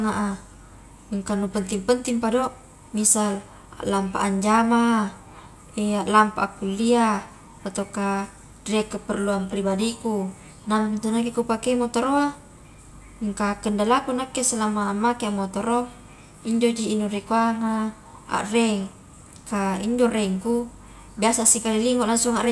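A speech recording with nothing technically wrong with it.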